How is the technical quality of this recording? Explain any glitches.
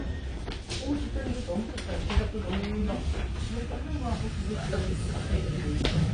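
The technical quality is poor, with lossy-coding damage throughout. The likely cause is AAC compression at a low bitrate, which fits about 32 kbps AAC-LC. Starved of bits, the encoder drops all content above 10.2 kHz and coarsely quantises what remains, so the sound is plainly dull, smeared and fizzy.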